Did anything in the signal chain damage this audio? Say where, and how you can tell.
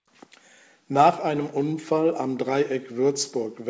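No, nothing in the signal chain damaged this audio; it came through a G.722 call path that was working normally.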